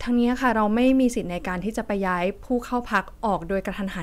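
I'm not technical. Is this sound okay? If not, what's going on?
No. Hard clipping occurs from 0.87 to 0.91 seconds: the speech briefly got louder than the recording chain could handle, so the tops of its loudest waves were sliced flat. That flattening adds a short crackle at that moment.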